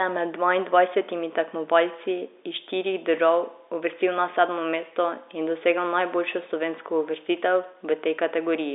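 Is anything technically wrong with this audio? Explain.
No, nothing in this speech clip points to a technical fault. It carries the narrow band of G.711 telephone coding, roughly 300 Hz to 3.7 kHz, with nothing above about 3.8 kHz, as expected for a fixed-line call.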